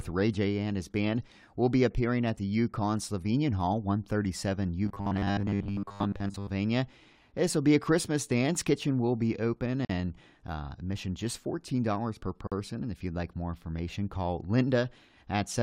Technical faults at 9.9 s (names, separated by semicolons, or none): gap at a join of encoded pieces